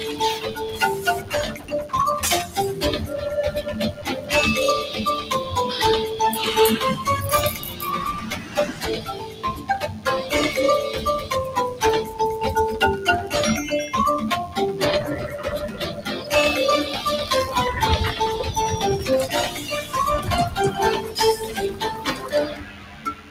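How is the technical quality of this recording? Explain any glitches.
The technical quality is compromised by two problems that run through the whole recording and by repeated level drops.

DECT cordless phone buzz is present throughout: a thin, steady 100 Hz buzz rich in harmonics, sitting well below the program, roughly 25 dB down. A nearby DECT handset or base transmits a burst every 10 ms, and the audio circuitry rectifies each burst into the signal.

A noise suppressor applied to music or sounds, a processor designed for speech, is active for the full duration. It treats steady tones, ambience and reverberant tails as noise and attenuates them. Transients pass while sustained material sinks, so the sound pumps and thins, with gain swinging by around 10 dB.

Sound cut by the noise suppressor occurs at 0.45–0.81 s (about 6 dB), 1.2–1.93 s (about 10 dB), 3.92–4.3 s (about 10 dB), 7.52–7.82 s (about 8 dB), 8.18–10.06 s (about 11 dB), 15.68–16.31 s (about 10 dB), 19.5–19.94 s (about 8 dB) and 21.01 s to the end (about 11 dB). 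In these spans the suppressor misclassified held or decaying sound as noise, so levels dip and decays are truncated.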